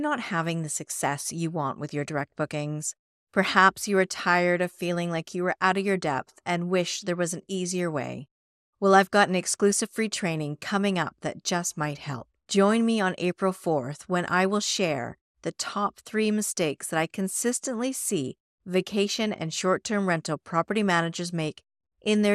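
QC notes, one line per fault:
Throughout, MP2 compression: the speech is dull, with a plainly audible gurgling, granular roughness, likely from MPEG Layer II coding at a low rate, which fits an 80 kbps stream. Short of bits, the encoder shuts off upper sub-bands and coarsely quantises the rest. On a spectrogram the top end shows blocky bands flickering on and off in rectangular patches beneath a hard ceiling; the waveform envelope looks intact, with the muted pauses dropping cleanly to silence.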